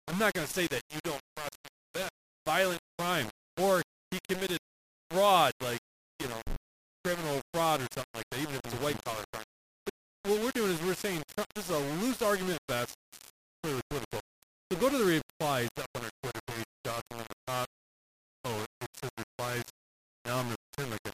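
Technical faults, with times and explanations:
Throughout: low bit depth without dither. The speech sounds grainy and gritty all the way through, with a rough distortion that rides along with the voice and shifts as it does. The quietest bits either drop out to silence or sputter between two levels. That points to the audio likely having been cut down to something like 4 bits and rounded with no dither, leaving the error tied to the signal and not much below it.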